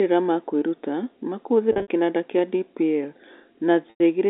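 Speech carried over a G.711 telephone path, band-limited to 300 Hz to 3.7 kHz, suffers packet loss with pitch repetition twice. Between "ma kwĩruta ma" and "kĩnanda kĩa", from 1.72 to 1.88 s, about 120 ms goes missing in gaps spread over 160 ms, the longest lasting 60 ms. A second 100 ms loss falls at 3.90 to 4.00 s. In both, the receiver loops the last pitch period to fill each gap, producing a brief held, buzzy tone that fades before the speech cross-fades back in.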